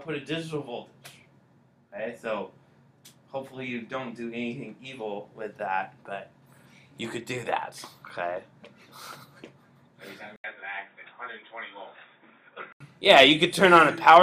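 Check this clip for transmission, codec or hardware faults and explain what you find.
There's one fault here. From 10.36 to 12.80 s, after an 80 ms gap, the sound turns dull and boxy with nothing above 3.8 kHz. A new noise floor sits about 55 dB down and the level barely moves. That's likely the input switched to a poorer device with a narrower band and its own noise.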